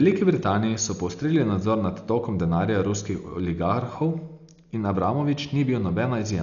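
A speech recording with heavy codec damage throughout. Nothing is heard above 6.9 kHz, so it sounds dull. A rough, fluttering noise surrounds the tones. The likely cause is Dolby Digital compression at a very low bitrate, which fits about 48 kbps.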